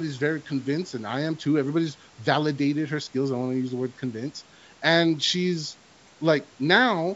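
Nothing is technically wrong with this speech recording: it has passed through a call's microphone processing, whose high-pass filter trims away the lowest bass as intended, and the audio reaches up to 8 kHz with no further problem to report.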